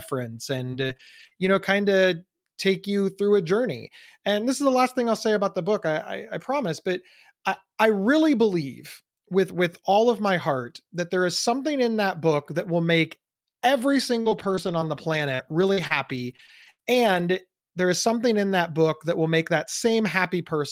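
From 0.57 to 1.63 s, before "of take you through", and 14.21 to 17.36 s, between "that will make every" and "there is something in", repeated packet loss (robotic sound) recurs: holes of up to 41 and 81 ms, each patched by extending the preceding sound, leave the speech choppy. Unlike a single dropout, the holes keep recurring in quick succession.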